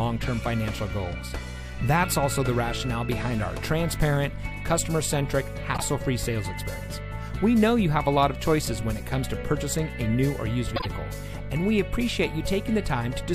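Frames out of order occur at 5.74 to 5.82 s and again at 10.76 to 10.86 s. In each, two neighbouring blocks of about 26 ms were decoded in swapped order, which fits single codec frames trading places. The short stretch plays with its two halves exchanged, giving a brief garbled flutter. No time is lost, so the sound carries on in step afterwards.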